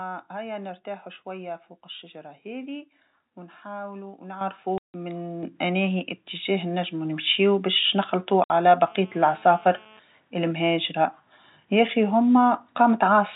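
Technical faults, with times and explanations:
4.41 s and 5.43 s, microphone volume stepped up: the speech and the room noise behind it jump in level together, by about 10 dB at the first step and about 6 dB at the second. Each change happens at once. The input gain was raised in a single jump when the microphone was judged too quiet, so the level rises as a step, and the background rises with the speech.
4.78–4.94 s and 8.44–8.50 s, packet loss filled with silence: the speech drops out completely for 160 ms and then for 60 ms. The lost audio was replaced with digital silence, so the waveform is cut off hard at both edges. Both gap lengths are multiples of 20 ms, which fits 20 ms packets, with several in a row lost each time.
8.87–9.99 s, GSM phone buzz: a hard, raspy buzz at 217 Hz with a dense series of harmonics sits about 28 dB below the speech and is unrelated to it. A nearby 2G handset on a call transmits in bursts 217 times a second, and the audio circuitry rectifies those radio pulses into a steady buzz. 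It stays constant across this stretch. The narrow telephone band of the G.711 coding keeps the harmonics below 4 kHz.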